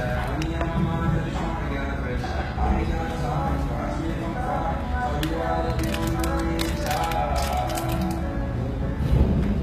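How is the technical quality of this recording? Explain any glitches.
The recording has plainly audible codec damage throughout, most likely from HE-AAC compression. The treble sounds gritty and metallic, with nothing above 14.9 kHz. Spectral band replication rebuilds the upper range by copying lower bands upward, which fits a very low bitrate around 20 kbps. On a spectrogram, the top shows blocky, repeated patterns that end in a hard ceiling.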